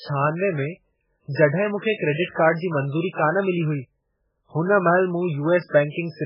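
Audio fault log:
Throughout: MP3 compression. The speech sounds dull and watery, with nothing above 5.2 kHz, so s sounds lose their edge and come out lisped and chirpy. Quiet detail swirls in and out as faint components vanish and return from one frame to the next, giving a metallic, underwater wash. The likely cause is heavy MP3 encoding at a starved bitrate, around 8 kbps. The encoder cuts the treble at a fixed point and zeroes the weak frequency lines it cannot afford to code.
2.24–2.29 s and 2.31–2.37 s: pre-echo. Two sharp onsets in quick succession are each preceded by a brief hiss, about 48 ms and 51 ms long. The attacks themselves sound soft and smeared rather than crisp. The codec spreads its quantisation noise across a whole transform block, so when a sudden loud onset lands late in a block, noise sized for that loud part also fills the quiet stretch just before it.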